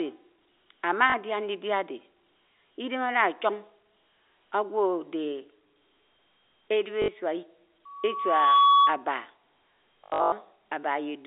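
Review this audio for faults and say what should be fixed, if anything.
Packet loss with last packet repeated occurs at 1.10 to 1.14 s (40 ms), 7.02 to 7.08 s (60 ms), and 10.04 to 10.32 s, where 240 ms drops out in patches, the longest run being 100 ms. The receiver replays the last packet, which fits 20 ms packets. The repeats buzz at about 50 Hz, giving a robotic stutter. A jitter buffer with proper concealment, plus forward error correction or redundancy on the link, would prevent it.

Loudspeaker feedback squeal runs from 7.85 to 9.04 s. A microphone hears its own loudspeaker, and at 1.1 kHz the loop gain passes unity. That tone swells over roughly 0.7 s to about 10 dB above the speech. Lowering monitor gain, moving the microphone off the speaker's axis, or notching 1.1 kHz would prevent it.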